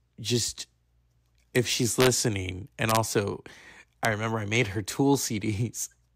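A sum or gain stage in the speech path ran past the largest value its integer format can hold and wrapped to the opposite sign instead of being held at the limit. Peaks that only just reach the top of the range flip across the full scale, giving violent cracks far sharper than clipping. This integer overflow strikes at 1.56 s, from 2.01 to 2.07 s, from 2.89 to 2.97 s, and at 4.05 s, just before "remember I made her".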